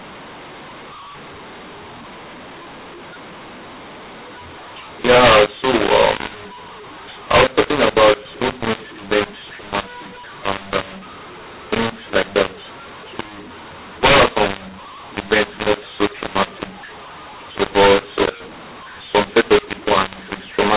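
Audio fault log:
throughout: mu-law and A-law mixed up. The speech was coded as A-law telephone audio but decoded as mu-law. Levels come out scrambled, some too loud and some too soft. The sound is harsh and distorted, and quiet gaps fill with noise.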